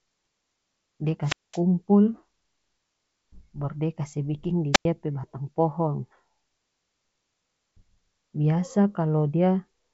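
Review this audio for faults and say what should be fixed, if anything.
Wireless microphone squelch dropouts at 1.23–1.60 s and 4.73–4.85 s: RF fades, hiss rises, then the receiver mutes for about 210 ms and 95 ms before the speech returns. Fix by improving antenna placement and line of sight, or by switching to diversity receivers.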